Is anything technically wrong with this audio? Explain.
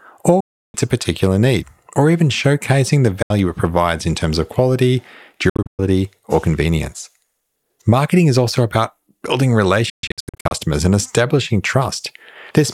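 Yes. The speech cuts to silence four times, most likely from Bluetooth dropouts: at 0.40–0.75 s (about 334 ms lost), 3.22–3.31 s (73 ms), 5.49–5.79 s and 9.90–10.52 s (broken gaps, runs up to 131 ms). Late packets are discarded, leaving abrupt holes, and the sound resumes further along, as though it had kept playing.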